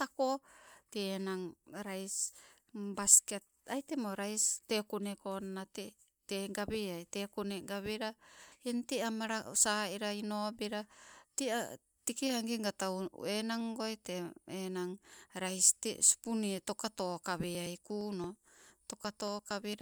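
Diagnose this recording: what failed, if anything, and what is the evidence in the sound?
The failure is in the driver or buffer stage: periodic USB or driver dropouts from 17.44 s to 19.74 s. Something stalls the audio path every 115 ms, and around 10 ms of audio is skipped outright each time rather than padded with silence. In the speech this comes through as a steady train of about twenty ticks, each a small jump where the waveform is cut and rejoined, audible wherever the voice carries signal.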